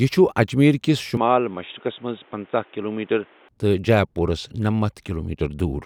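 A speech recording in which the sound abruptly turns dull and boxy at 1.17 s, with no gap at the change, and stays that way until 3.49 s before clearing up again. In that stretch nothing reaches above 3.8 kHz, the level drops by a few decibels, and a new background noise appears roughly 30 dB under the speech. This is likely an input switched to a poorer device mid-recording, a narrower-band microphone or headset call profile briefly taking over before the original input returned.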